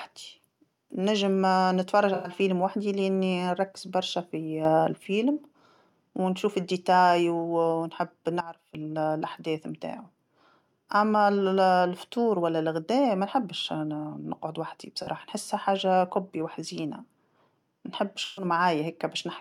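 At 2.14 to 2.30 s the AAC decoder lost audio frames and had to conceal the gap. It rebuilt about 107 ms, which fits five lost frames, from the last good spectrum. The speech turns briefly smeared and noisy there. The same AAC frame loss with concealment returns at 15.03 to 15.08 s, about 43 ms, which fits two frames, and at 18.24 to 18.45 s, about 128 ms, which fits six.

At 4.65 to 4.97 s a sudden gain jump lifts speech and background together by about 6 dB. A second jump at 8.41 to 8.75 s drops them by about 15 dB. Each is likely a digital gain change applied without a ramp.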